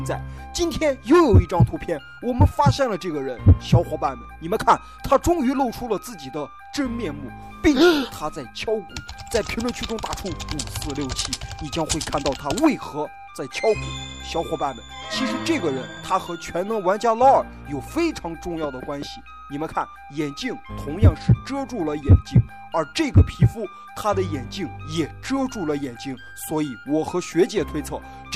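There are three tiny skips at 5.98, 15.97 and 25.97 s, about 10 s apart, each dropping a few milliseconds, likely audio missing between chunks at each 10-second boundary.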